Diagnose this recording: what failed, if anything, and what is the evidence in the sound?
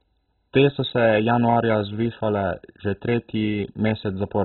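The failure sits at the codec stage, likely MP2 compression starved of bits. Throughout the speech nothing survives above 4.1 kHz, and the remaining bands flicker and gurgle coarsely, which fits a rate near 16 kbps. A plain low-pass filter would dull without that granular bubbling.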